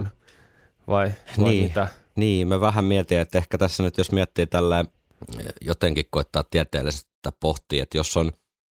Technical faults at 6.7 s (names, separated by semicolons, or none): none